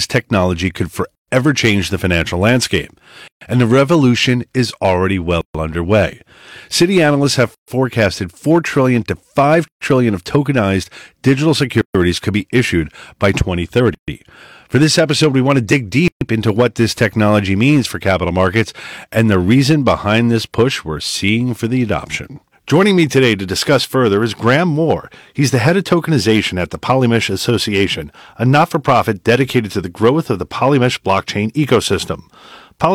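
Hard clipping runs through the whole speech clip. The signal is driven about 7 dB past what one stage can pass, so peaks are sliced flat. Only a small share of samples is cut. The flat tops add high harmonics, heard as crackle on loud syllables.

A gap at a join of encoded pieces opens at 1.15, 3.28, 5.41, 7.55, 9.68, 11.81, 13.95 and 16.08 s. Each gap lasts about 130 ms and falls after every 2 s of sound. Separately encoded pieces were joined without trimming their start delay and end padding. The speech drops out abruptly, smeared at the edges, then resumes where it stopped.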